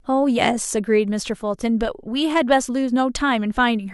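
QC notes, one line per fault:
No faults found in the speech clip. Nothing calls for a marked time or range.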